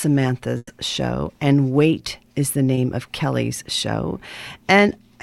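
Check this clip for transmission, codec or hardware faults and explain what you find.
Two transmission faults turn up, both dropped packets.

From 0.57 to 0.69 s there's a burst of packet loss: about 100 ms went missing, the receiver stretched the last sound into a fading tail, then roughly 30 ms of silence before audio resumes further on.

Around 2.75 to 2.79 s, a short concealed packet loss: about 20 ms never arrived, got patched by extrapolating the previous sound, and comes across as a quick smear.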